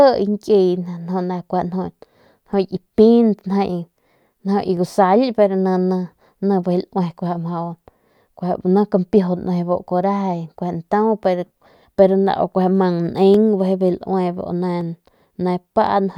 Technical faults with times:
4.77 dropped samples
13.34 dropped samples
14.81 dropped samples

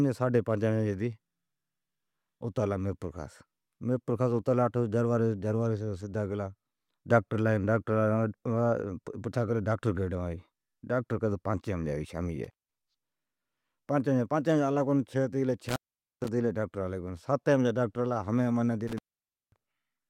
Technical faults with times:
12.44-12.75 intermittent contact
15.69-16.28 intermittent contact
18.88-19.64 intermittent contact

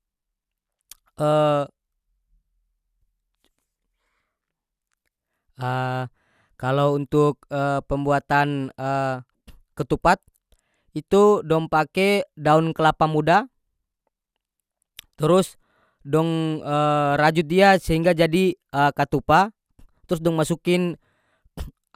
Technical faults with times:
0.00-21.95 generation loss

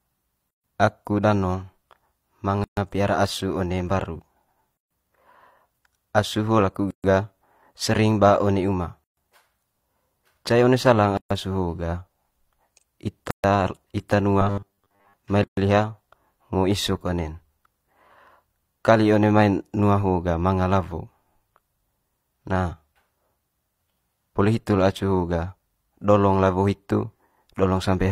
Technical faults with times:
0.51-0.64 gap at a join of encoded pieces
2.64-2.77 gap at a join of encoded pieces
4.77-4.91 gap at a join of encoded pieces
6.91-7.04 gap at a join of encoded pieces
9.04-9.17 gap at a join of encoded pieces
11.17-11.31 gap at a join of encoded pieces
13.31-13.44 gap at a join of encoded pieces
14.42-15.14 robotic sound from repeated short buffers
15.44-15.57 gap at a join of encoded pieces

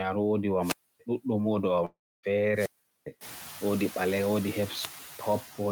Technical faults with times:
0.00-5.71 noise suppressor artifacts
0.58-1.02 wireless microphone squelch dropout
1.85-2.25 long network dropout
2.48-3.12 wireless microphone squelch dropout

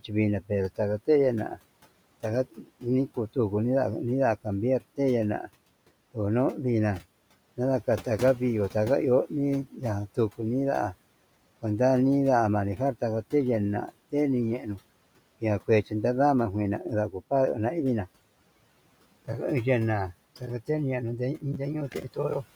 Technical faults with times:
2.52-2.83 speech cut by the noise suppressor
14.59-14.79 speech cut by the noise suppressor
21.92-22.17 speech cut by the noise suppressor

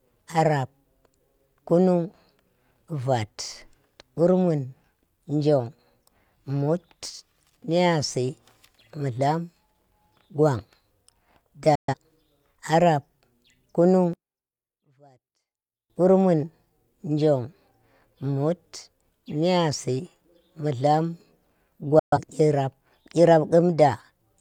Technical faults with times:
11.75-11.94 digital broadcast dropout
14.13-15.90 one channel inverted
21.99-22.18 digital broadcast dropout

